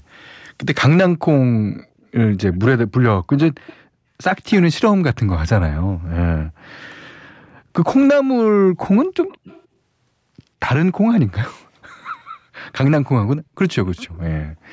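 From 0.87 s to the end, de-emphasis was applied wrongly: a treble cut tilts the response down to about 13 dB lower at 10 kHz, leaving the speech dull and muffled. At 1.84–2.06 s, 2.53–2.57 s, 3.38–3.76 s, 9.28–9.63 s and 13.86–14.19 s there is echo leak, likely from a loudspeaker echo canceller letting through sound its microphone picked up. It adds faint delayed copies of the speech, roughly 172 to 184 ms late.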